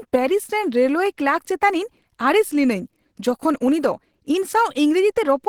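The clip is speech, and the damage runs throughout. It sounds hoarse and muffled, and the codec artefacts are plainly audible. The likely cause is Opus compression in hybrid mode, consistent with a low bitrate near 16 kbps. The band stays full, reaching about 20.2 kHz.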